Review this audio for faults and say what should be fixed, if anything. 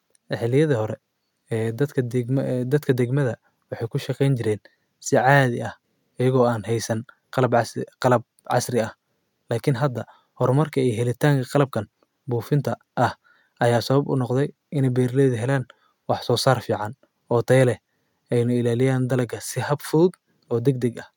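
Nothing in the recording calls for repair; the speech signal holds steady and intact throughout, with no technical fault to correct.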